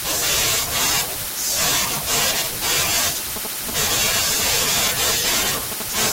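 From 3.36 to 5.82 s, GSM signalling bursts break in. A nearby 2G phone's radio pulses are rectified into galloping ticks and short 217 Hz buzzes, around 10 dB below the speech. From 5.97 to 6.08 s, GSM phone buzz takes over. The phone's steady call transmission produces a hard, raspy 217 Hz buzz, about 7 dB below the speech.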